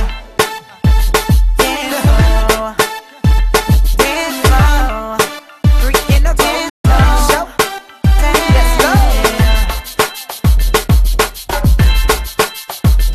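At 6.69 s the sound fades out over about 8 ms and stays silent until 6.85 s, a gap of roughly 144 ms, then resumes where the programme has moved on rather than picking up where it stopped. This is a digital broadcast dropout: the receiver stopped getting usable data, either because it lost the signal or because frames failed their checksum, and muted until valid frames arrived. The length of the hole fits about six lost frames, and the material sent during that time is gone.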